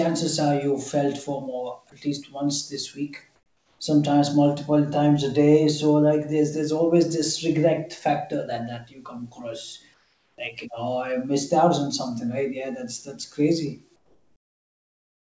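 A speech recording carried over a call path, with nothing above 8 kHz, which fits a wideband G.722 codec. Three times the real room background gives way to a steady, featureless hiss: comfort noise in place of the background, likely because the sender stopped transmitting during pauses and the receiver synthesised filler. This happens from 3.36 to 3.80 s, just before "sometimes multiple times a", from 9.94 to 10.38 s, and from 13.96 s to the end, after "that's that's crazy". The background is already about 42 to 46 dB below the loud passages, and each patch drops it by a further 5 to 8 dB. On a spectrogram these stretches show as smooth, evenly smeared bands with the fine texture of the room gone, and the waveform's noise floor steps down into a flat, uniform band. At 10.36 s there is an onset clipped by the voice detector, likely from the detector reacting late as speech resumed, so the first 20 ms before "like you know I" were never sent and the sound starts abruptly. 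In the waveform the envelope jumps straight from the low comfort-noise floor to full level, and on the spectrogram the speech energy begins as a hard vertical edge with no gradual lead-in.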